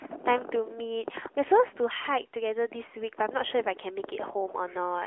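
No faults are present in this speech recording.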